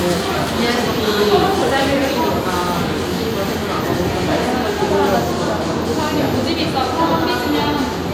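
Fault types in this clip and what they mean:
Aliasing: present throughout the clip. The sample rate was reduced without a proper low-pass filter first, which fits a drop from 44.1 kHz to 32 kHz. Any content above the new 16 kHz limit folds back below it and lands at unrelated frequencies, leaving a gritty, metallic layer over the high end of the sound. The folded components sit roughly 25 dB below the signal, and the spectrum stays crowded right up to 16 kHz.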